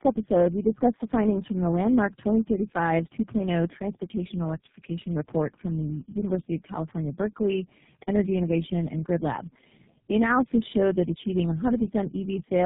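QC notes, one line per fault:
Throughout: tandem speech coding. Rough, muffled, warbly speech with nothing above 3.7 kHz, which fits about four low-rate speech codecs in series, each re-coding the previous one's degraded output.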